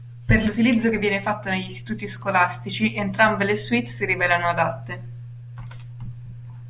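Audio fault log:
No faults were heard in the speech. Nothing in the clip calls for an entry in this log.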